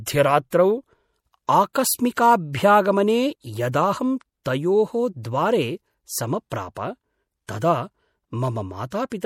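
Throughout, the speech sounds watery and swirly, with dulled treble and smeared s sounds, most likely MP3 compression at a low bitrate, around 64 kbps.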